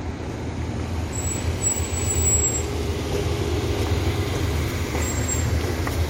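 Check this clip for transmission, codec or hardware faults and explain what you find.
Nothing here points to a transmission, codec or hardware problem; the sound just runs along as it should.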